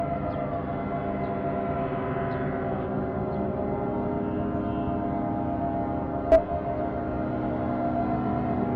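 Brief chirps or squawks break into the sound at 1.72 to 1.76 s, 3.81 to 3.86 s, 6.32 to 6.38 s and 8.60 to 8.64 s, each lasting 40 to 60 ms. These are damaged data in the compressed stream: bytes at those points were lost or corrupted, so the decoder misread the affected frames, lost sync and had to hunt for the next valid frame header before playback could resume cleanly.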